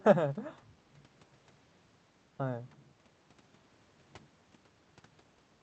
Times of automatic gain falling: none

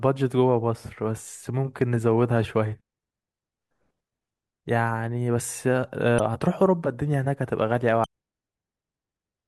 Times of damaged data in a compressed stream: 2.79, 6.19, 8.04-8.06

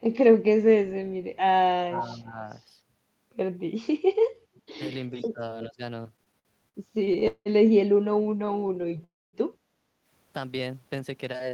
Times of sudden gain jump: none

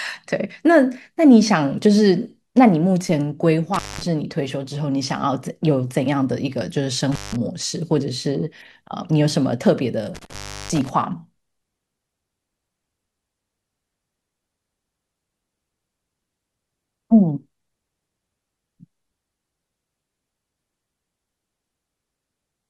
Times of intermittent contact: 3.74-4.03, 7.12-7.36, 10.15-10.90

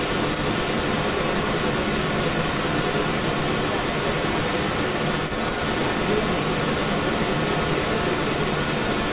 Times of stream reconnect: none

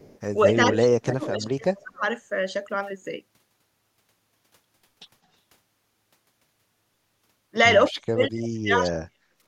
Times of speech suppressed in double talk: 0.47-2.02, 7.91-9.35

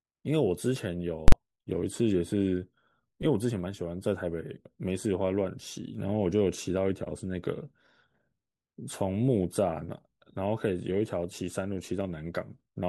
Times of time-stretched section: none

